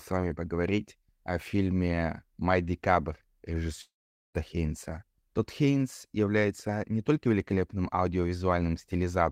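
From 3.81 to 4.36 s, the speech turns into a fading buzz and then silence, likely a long network dropout. About 0.4 s is lost, leaving a blank band on the spectrogram.

From 6.26 to 7.53 s, a jitter buffer speed-up plays the speech about 10% fast at unchanged pitch, trimming roughly 0.15 s. The waveform looks compressed, with harmonics unchanged.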